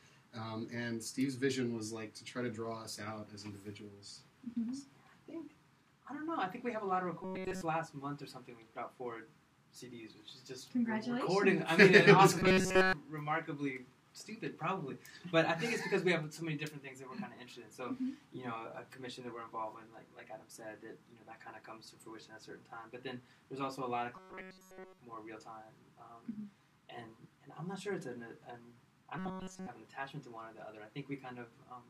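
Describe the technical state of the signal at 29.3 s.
At 29.3 s you're in a robotic sound from repeated short buffers, 29.19 to 29.67 s: a rigid 188 Hz buzz, likely from a roughly 5 ms chunk looping throughout.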